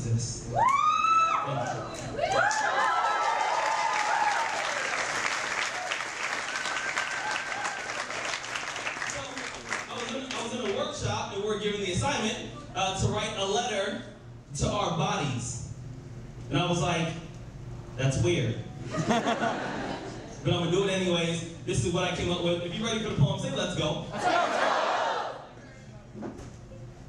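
No technical faults can be heard anywhere in the audio.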